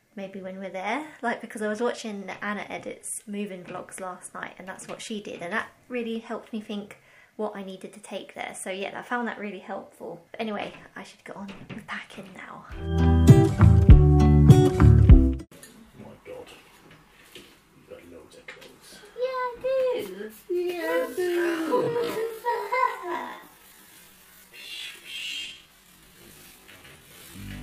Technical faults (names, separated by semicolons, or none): time-stretched section